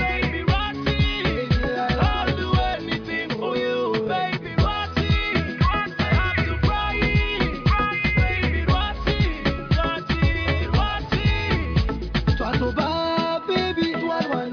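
No technical faults can be heard anywhere in this audio.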